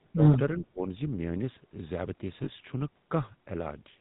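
The whole clip has that GSM full-rate codec sound: a buzzy, gravelly roughness laid over the speech, and nothing above 4 kHz. The codec rebuilds the voice from a vocal-tract model driven by a coarse pulse excitation, which fits the old 13 kbps full-rate coder. The damage is plainly audible.

At 2.44 s there's a brief spot of lost GSM frames, running to about 2.49 s. The decoder just reused the last good frame, so for roughly 40 ms, which fits two 20 ms frames, you hear a short metallic ring instead of fresh sound.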